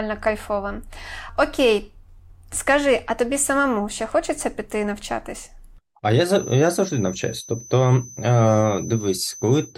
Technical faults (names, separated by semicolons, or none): feedback whistle